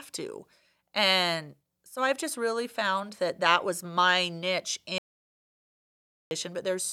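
An audio dropout to silence runs from 4.98 to 6.31 s in this speech recording, a gap of about 1.33 s where the sound cuts out mid-flow and drops to silence with no room tone underneath. Because the level falls to silence rather than to background noise, the input signal was most likely lost upstream while the recorder kept writing empty samples, so whatever was spoken during that stretch is simply gone.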